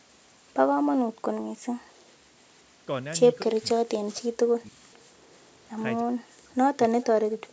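On this speech recording, the likely culprit is a far-end echo canceller that let part of its loudspeaker pickup slip through, producing echo leak: a faint delayed copy of the talker, trailing by about 0.3 s and sitting roughly 35 to 40 dB below the direct speech, surfaces at 2.42 to 2.61 s, 5.46 to 5.71 s, and again from 7.48 s to the end. The same canceller, likely unable to tell the local talker from echo while both sides spoke, pulled everything down, giving speech suppressed in double talk at 3.45 to 4.9 s, 6.01 to 6.57 s and 6.89 to 7.39 s. There the voice sinks by as much as roughly 40 dB over about a second, half a second and a third of a second respectively, beneath an 8 kHz ceiling set by the call's microphone processing.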